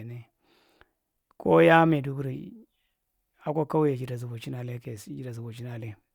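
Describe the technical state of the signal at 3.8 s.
At 3.8 s the speech signal is intact, with no dropout, distortion, glitch or other technical fault at that moment.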